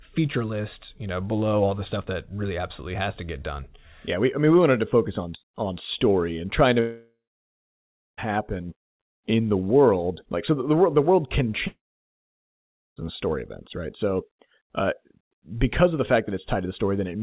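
Speech, heard over a call line with nothing above 4 kHz, which fits G.711 mu-law. There are two gaps. The first runs from 6.8 to 8.19 s. The second runs from 11.67 to 12.98 s. Each is a long network dropout, likely. The last sound carries on as a brief fading buzz. Then there is silence, about 1.0 s in the first gap and 1.2 s in the second. The speech resumes with the missing audio gone.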